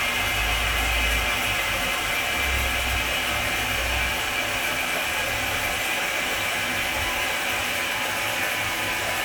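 No technical faults can be heard anywhere in this recording of sounds, and nothing in the signal points to a problem in how it was captured, processed or delivered.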